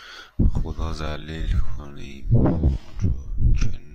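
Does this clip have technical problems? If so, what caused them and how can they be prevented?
Yes. From 1.0 s to the end, the speech is a time-stretched section: a likely cause is software lengthening the audio to fill a fixed duration while holding pitch, repeating short slices to pad it out. The pace drops abruptly to about 0.58 times the original rate while the pitch stays the same, so the speech drags. Prevention is to keep clip lengths matched to their time slots, or to re-record or edit the content rather than letting the software stretch it to fit.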